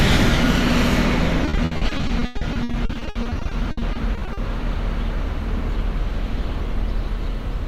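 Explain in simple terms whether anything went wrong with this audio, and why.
From 1.45 to 4.39 s, repeated packet loss (robotic sound) chops the audio into dozens of short holes, each patched with repeated sound. Unlike one clean dropout, the rapid patching leaves the sound choppy, with pieces missing.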